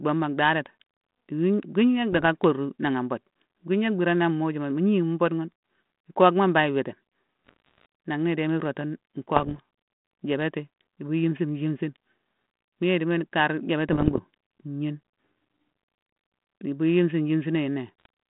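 Bit errors on an ADPCM link hit at 2.12–2.24 s, 7.47–7.86 s, 9.36–9.59 s, 13.89–14.20 s (just after "yéye idimo kar") and 18.00–18.06 s. Each flipped bit, at a rate below one percent, knocks the decoder's step size and predictor off track. The error rings on as pops, rough bursts and brief level jumps in the 150 Hz to 3.5 kHz telephone band.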